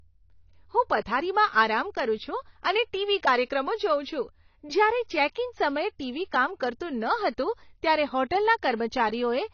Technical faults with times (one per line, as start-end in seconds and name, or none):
0.00-9.53 AAC compression